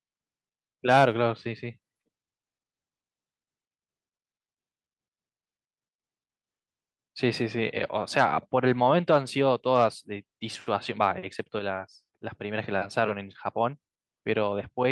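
No technical faults can be heard at any point, so there is nothing to describe in time order.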